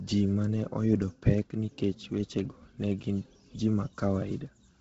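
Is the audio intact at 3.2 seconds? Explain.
No. At 3.2 seconds, as throughout the clip, the speech carries a breathy, grainy edge and nothing above 7.7 kHz, likely from Bluetooth LC3 compression. The heavy damage fits a low bitrate near 16 kbps in 10 ms frames, with the upper spectrum discarded and partly refilled with noise.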